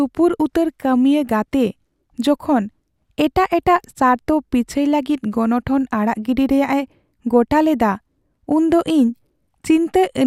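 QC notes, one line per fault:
Nothing stood out on listening to the speech in this recording.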